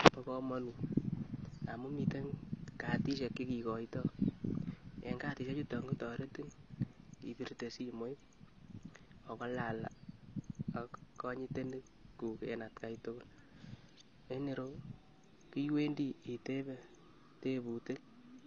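From start to finish the speech has likely been through AAC compression, AAC-LC at a low bitrate that fits about 24 kbps. The encoder kept nothing above 8 kHz and coded the rest coarsely, so the sound is dull and smeared, with plainly audible codec damage.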